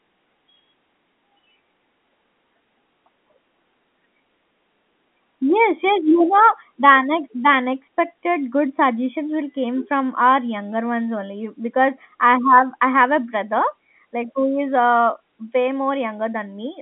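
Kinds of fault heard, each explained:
Nothing stood out on listening; the speech simply carries the narrow band of an ordinary telephone line, with no content above about 3.8 kHz.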